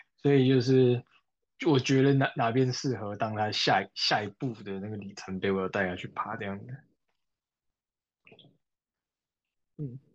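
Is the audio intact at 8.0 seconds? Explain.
Yes, the audio is intact at 8.0 seconds, with no fault audible at that point in the speech.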